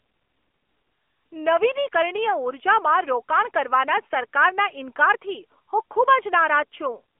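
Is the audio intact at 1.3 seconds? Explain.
No. At 1.3 s, as throughout the clip, the speech carries AMR narrowband mobile codec damage. A pulse-driven vocal-tract model rebuilds each 20 ms frame, so nothing above 3.5 kHz survives and the voice sounds thin and plainly buzzy, which fits a mid-rate mode around 10 kbps.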